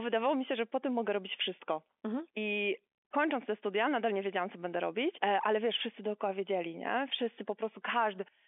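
No faults heard in the speech; the band runs from roughly 300 Hz to 3.5 kHz with nothing above about 3.7 kHz, which points to ordinary G.711 mu-law telephone coding at 64 kbps.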